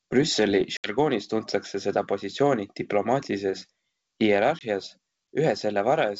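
Packet loss on an ADPCM call twice drops audio, which is replaced by silence, leaving the decoder's adaptive predictor and step size out of step with the sender. At 0.77 to 0.98 s about 70 ms disappears, roughly a handful of packets. After the hard-edged hole the speech returns slightly distorted on "tuntakse seda positsiooni diplomaatilises". At 4.59 to 4.62 s a shorter 20 ms gap recurs. The G.722 wideband path otherwise adds at most a faint upper-band hiss.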